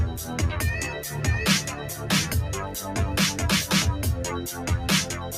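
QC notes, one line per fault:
Throughout: noise suppressor applied to music or sounds. A speech-tuned suppressor misreads sustained tones, ambience and reverb as noise and pulls them down, while sharp onsets pass largely intact, so held material and decaying tails sink by roughly 5 dB and the sound pumps and thins. Unlike compressor pumping, the dips follow how steady the sound is rather than how loud, and tails sink unnaturally early instead of ducking after peaks.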